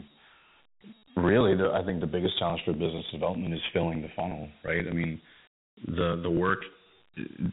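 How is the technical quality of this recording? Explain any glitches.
The recording has two faults, and both run through the whole clip of speech.

The first is channels drifting apart. Two devices recorded on separate clocks that disagree by about a hundred parts per million. The gap between them grows steadily, reaching under a millisecond by the end. Mixed to mono, the two copies cancel at certain frequencies. Those notches move slowly down through the spectrum as the gap grows. The result is a slow flanging sweep across the speech.

The second is Dialogic VOX ADPCM, the format of phone menus and voicemail. Each sample is stored as a 4-bit step from a running prediction. The sound points to a rate of about 32 kbps, which fits 8 kHz sampling. Nothing is present above 3.8 kHz, so the speech sounds boxed in and phone-like. The coarse steps leave a plainly audible gritty hiss that follows the speech.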